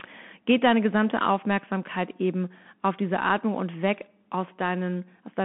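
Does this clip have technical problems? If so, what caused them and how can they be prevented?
Yes. The speech runs through a Bluetooth CVSD headset codec for its whole length. Nothing passes above 3.8 kHz and the line band sits near 150 Hz to 3.4 kHz. The delta modulator, which fits a 64 kbit/s one-bit stream, can't track fast high-frequency swings, leaving grainy hiss and scratchy s sounds. To prevent it, record through a wired microphone or a wideband Bluetooth mode instead of the headset's narrowband link.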